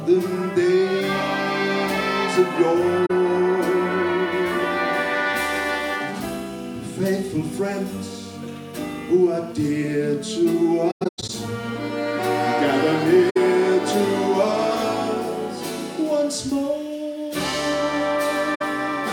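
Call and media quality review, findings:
AAC frame loss with muting: soft dropouts at 3.06 s (about 43 ms), 13.30 s and 18.54 s (64 ms each), and a broken cluster from 10.90 to 11.30 s. Decoder zeroes the lost spectrum, and overlapping windows fade the edges. Spectrogram shows full-band vertical gaps; waveform shows tapered holes.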